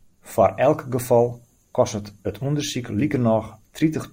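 No audible faults occur anywhere in this recording.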